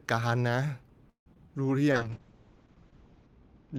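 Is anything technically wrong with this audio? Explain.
Yes, there are three kinds of fault.

From 1.09 to 1.28 s there is a call audio freeze. The sound stretches into a fading buzz or hiss, then about 0.11 s of silence. Nothing is lost afterwards. The audio resumes where it stopped, now about 0.17 s later. This is likely a jitter buffer running dry while packets were delayed in transit. The receiver extended the last sound to cover the wait, then carried on once the packets arrived.

Short concealed packet loss follows at 1.34 to 1.37 s and again at 1.47 to 1.50 s. Each time, about 20 ms of audio never reached the decoder. The receiver bridged each gap by extending the preceding sound, then blended back into the real signal. Each one is heard as a brief smear or wobble. Anything very short in those spots may be swallowed.

A call bitrate drop starts at 1.94 s and lasts to the end. The encoder was pushed to code far more coarsely, which fits a fall from about 32 to 8 kbps. 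It stays at its lowest for about 1.3 s. The audio bandwidth also narrows from 20 kHz to 8 kHz. The sound turns muffled and rough, losing its upper frequencies.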